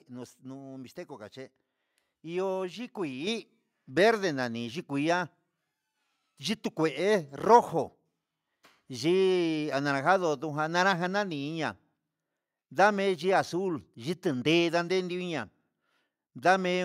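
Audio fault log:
3.27 s, microphone volume stepped up: the input gain jumps about 6 dB in one go, so the speech and the room noise both get louder together.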